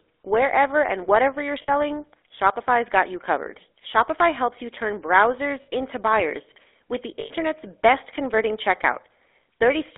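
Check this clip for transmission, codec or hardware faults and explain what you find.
The clip carries two faults: GSM full-rate coding throughout, and three short bursts of lost GSM frames.

The GSM full-rate codec is present for the whole clip. The speech is squeezed into a line band of roughly 300 Hz to 3.6 kHz and rebuilt from a vocal-tract model driven by sparse, regularly spaced pulses, which fits 13 kbps full-rate GSM. The result is a plainly audible buzzy, gravelly roughness. On a spectrogram, nothing appears above 3.6 kHz, and the harmonics look coarse and smeared.

Lost GSM frames occur three times:

1. At 1.62 to 1.71 s, just after "and whatever you're", lasting about 60 ms.
2. At 5.62 to 5.69 s, between "helps you turn browsers" and "into buyers with the", also about 60 ms.
3. At 7.20 to 7.31 s, between "into buyers with the" and "best converting", about 100 ms.

The 60 ms gaps are consistent with three 20 ms frames, and the 100 ms gap with five. 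In each case the decoder replays the last good frame's settings, so instead of the speech continuing you hear a held, metallic ring. On a spectrogram, each gap shows frozen, repeated spectral bands.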